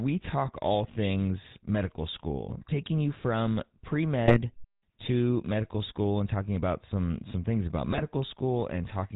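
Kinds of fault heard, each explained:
GSM full-rate codec: The whole clip carries the sound of the original GSM speech coder, at a rate consistent with 13 kbps. The decoder rebuilds the voice from a vocal-tract filter excited by a sparse, regularly spaced pulse train, so most of the fine excitation detail is gone. The result is a plainly audible buzzy, gravelly texture, with nothing above 4 kHz and a dull, band-limited top end.
GSM bit errors: Three short bursts of corruption break through, at 2.58 to 2.74 s, 4.27 to 4.38 s and 7.92 to 8.03 s, each lasting around a tenth of a second or a little more. Flipped bits reaching the decoder scramble its filter, pitch and gain parameters for the affected frames, so the spectrum bends and the level jumps. The speech briefly turns into squawks and gargling before recovering.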